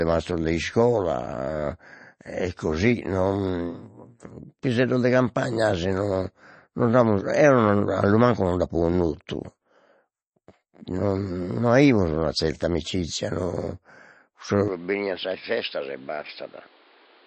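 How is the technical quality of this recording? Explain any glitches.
Quality is fairly poor: there's compression damage all the way through, and the last few seconds get worse again.

MP3 compression is likely the cause of the smeared, watery texture across the whole clip. Nothing comes through above about 8.3 kHz, which fits a low bitrate around 32 kbps. The encoder starves weak frequency lines, so sibilants swirl and consonant attacks blur.

Input switched to a poorer device, most likely, at 14.68 s and running to the end. With no gap at the switch, the band narrows abruptly to about 5.2 kHz, giving a duller, boxier tone. The level drops a few dB, and a new, faint noise floor sits well under the speech.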